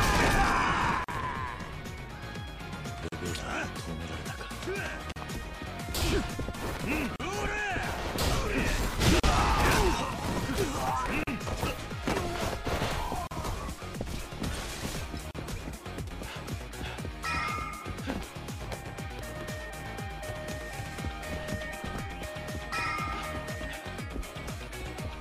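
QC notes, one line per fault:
1.04, 3.08, 5.12, 7.16, 9.20, 11.24, 13.27, 15.31 s: gap at a join of encoded pieces. Separately encoded pieces were joined untrimmed, so encoder delay and padding leave 38–42 ms silences every 2 s, with smeared edges.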